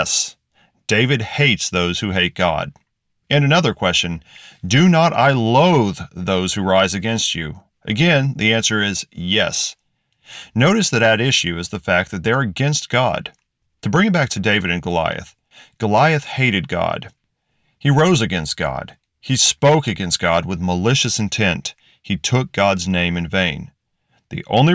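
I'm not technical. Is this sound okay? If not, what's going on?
Yes, this sound is okay; there's nothing going on that needs fixing.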